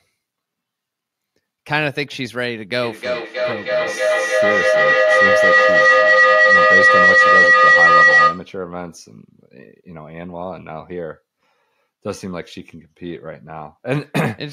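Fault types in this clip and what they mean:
feedback howl: sound loops from loudspeaker back into microphone, gaining each trip. From 2.82 s a tone near 2 kHz builds, pulsing roughly every 300 ms, to about 12 dB above the speech until 8.55 s. A spectrogram shows one bright horizontal band.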